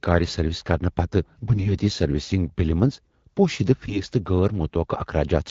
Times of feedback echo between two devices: none

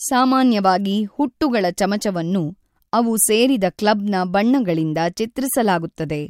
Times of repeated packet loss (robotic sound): none

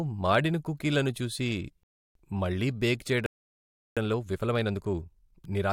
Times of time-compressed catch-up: 3.97-5.72

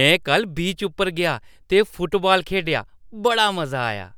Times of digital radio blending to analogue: none

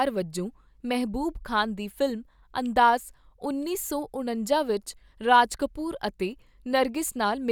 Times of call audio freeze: none

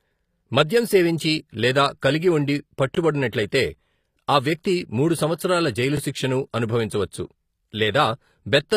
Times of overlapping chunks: 2.95-2.97

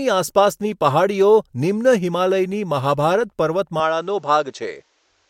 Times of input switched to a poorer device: 3.80-5.29

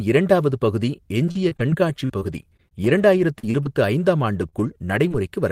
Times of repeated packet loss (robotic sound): 1.19-5.12

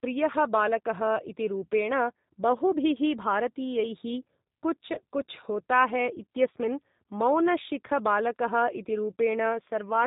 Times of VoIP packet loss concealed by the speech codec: 4.95-5.00

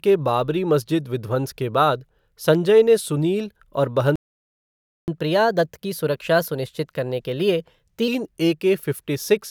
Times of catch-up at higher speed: 5.08-8.08

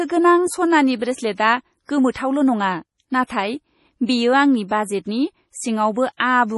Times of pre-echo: 2.11-2.15, 3.24-3.30, 6.16-6.20

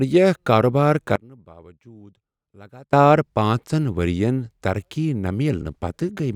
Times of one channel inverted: 1.16-2.93

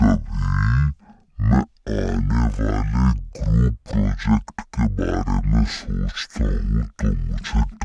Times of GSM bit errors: none

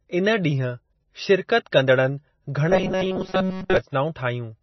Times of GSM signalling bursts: none

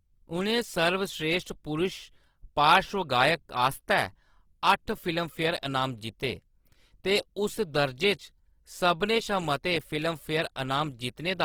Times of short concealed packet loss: none

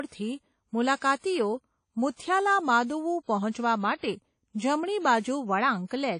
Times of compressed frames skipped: none

